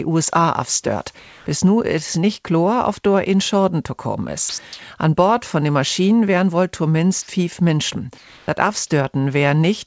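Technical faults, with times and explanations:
1.19–1.46 s and 8.18–8.48 s, comfort noise in place of the background: the quiet background, about 27 and 29 dB below the loud passages, turns into a steady, featureless hiss about 2 dB quieter for 270 ms and 300 ms. The likely cause is discontinuous transmission: the sender stops sending during pauses, and the receiver fills the gap with synthetic noise roughly matching the background's spectrum.
4.49–4.58 s, sound dropped by the voice detector: for 90 ms the audio gives way to steady noise, and about 40 ms of real sound is lost before it returns. The sender's voice detector likely misread a quiet stretch of sound as background and stopped transmitting, so the receiver played comfort noise instead.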